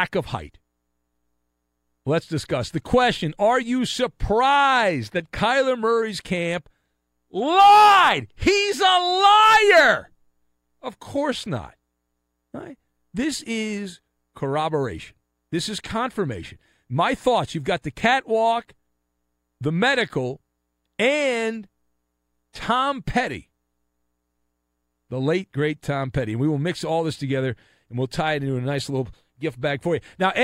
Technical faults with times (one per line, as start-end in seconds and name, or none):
none